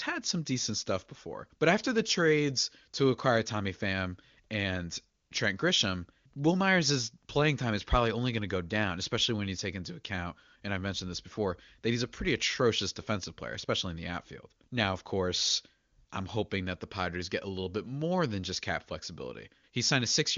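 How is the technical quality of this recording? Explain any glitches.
The technical quality of this recording is good, and there are no glitches to explain.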